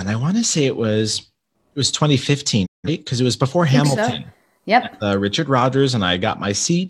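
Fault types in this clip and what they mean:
Digital broadcast dropout: the receiver stopped getting good frames, so it muted rather than play damaged data, and that audio is simply gone. Here the speech fades out over about 20 ms at 2.65 s, stays silent, and comes back at 2.89 s on "because it was before". Roughly 170 ms of programme never arrives, which fits around four lost frames. It's a single clean hole.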